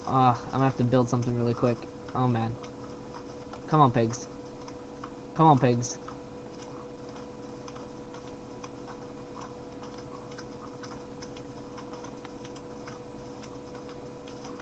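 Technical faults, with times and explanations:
No faults are present: the signal shows the ordinary marks of a call's microphone processing and codec path, with the lowest bass trimmed and nothing above 8 kHz, which fits a call codec running at a narrowed bandwidth.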